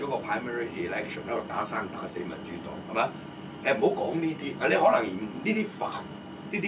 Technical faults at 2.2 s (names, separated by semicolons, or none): none